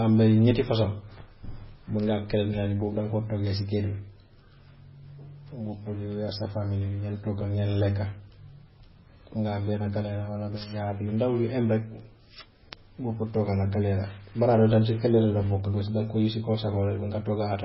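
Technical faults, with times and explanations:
Throughout, MP3 compression: the speech has nothing above 5.6 kHz, so it sounds dull and boxed in. The damage is heavy. Weak frequency detail flickers in and out from frame to frame, giving a watery, swirly texture and metallic chirps on s sounds. Sharp onsets smear. The likely cause is an MP3 encoder starved of bits, which fits a bitrate around 16 kbps. It cut the treble and dropped quiet components to save space.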